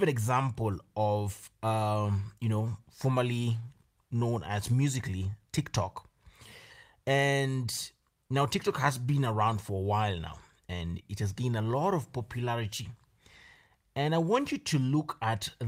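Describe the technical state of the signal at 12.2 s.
At 12.2 s the speech signal is intact, with no audible fault at that moment.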